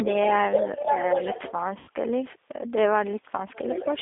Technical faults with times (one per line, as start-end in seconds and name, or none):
0.00-4.01 G.729 codec
0.54-1.51 other side's voice leaking through
0.79-0.90 speech suppressed in double talk
1.79-1.90 VoIP packet loss concealed by the speech codec
3.54-4.01 other side's voice leaking through